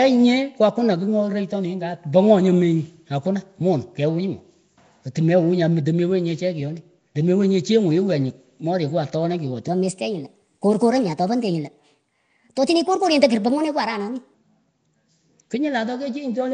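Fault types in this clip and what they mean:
Nellymoser compression: The speech carries a rough, hissy halo and a smeared, underwater quality that is plainly audible throughout. Weak bands that get no bits are filled with noise, which produces that grainy fizz. Unlike the clean muffling of a simple low-pass, the damage moves with the sound. The character points to a low rate near 32 kbps, likely from Flash's Nellymoser Asao microphone codec.
Section at the wrong speed: From 9.68 s to 14.34 s the speech runs 1.23 times too fast, so it sounds hurried and sits about four semitones higher. Speed and pitch jump together at the start and snap back at the end. That separates it from a pitch-shift effect, which would raise the voice while leaving the timing intact. The likely cause is that stretch being played against the wrong clock.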